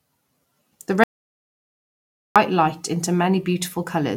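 From 1.04 to 2.36 s an audio dropout to silence cuts the speech, likely lost input; the waveform flatlines and the spectrogram goes completely blank.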